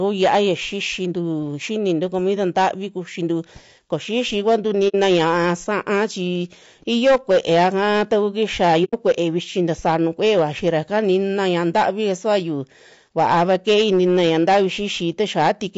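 Through the whole recording the louder syllables carry a harsh crackle and fuzz, because the speech peaks are driven about 9 dB beyond what the signal path can pass and are cut flat. That hard clipping touches a few percent of the samples, and the squared-off tops spray harmonics high into the spectrum.

The speech also sounds rough and grainy, with a hiss-like noise filling the gaps between harmonics and a thin, somewhat synthetic top end. The likely cause is low-delay AAC compression (AAC-ELD), whose short frames resolve pitch poorly. The damage fits a bitrate around 32 kbps.

At 4.88 s, right after "kuxintu koo xixi kuantu", the sound fades into a soft-edged gap of about 60 ms and fades back. At 8.84 s a similar gap of about 90 ms falls between "kaa taku kixia" and "kue'e vichi". Both holes come from AAC frame loss with muting. Their lengths fit two and three lost frames whose spectra the decoder zeroed, and the overlapping windows blur the edges.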